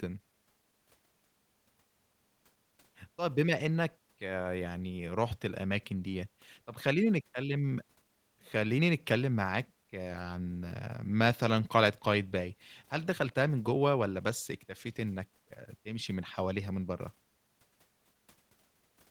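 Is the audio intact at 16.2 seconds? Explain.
Yes, at 16.2 seconds the speech is intact, with only the light, full-band Opus voice compression at about 20 kbps that runs through the whole clip.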